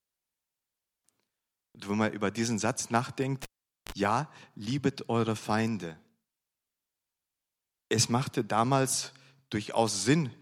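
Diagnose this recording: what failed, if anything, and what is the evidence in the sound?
A pop at 3.43 s drops the speech to near silence for about 0.44 s, then a 35 ms burst of 50 Hz buzz and a second pop bring it back at 3.92 s. This is a cable pulled and plugged in, an analogue wiring fault: the live lead disconnected, and mains hum leaked in while only the tip made contact.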